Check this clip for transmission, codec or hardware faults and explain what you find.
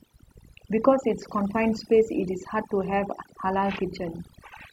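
The clip has one fault, overdone noise removal, present for its whole length. A noise reduction stage was set far too aggressively on this speech. Every frequency band that falls near the estimated noise level is pulled down hard or muted, and quieter parts of the voice are taken out with the noise. The pauses drop to near silence broken by twinkling specks.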